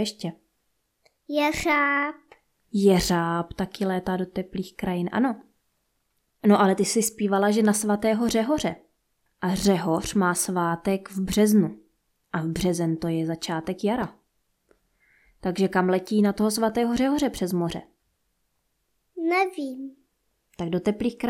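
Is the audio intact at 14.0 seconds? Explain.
No, there's a short burst of DAB burbling from 14.01 to 14.12 s. Bit errors, around a fifth of a percent, slipped past the error correction into the MP2 data, so individual sub-bands get short blips of noise over the speech.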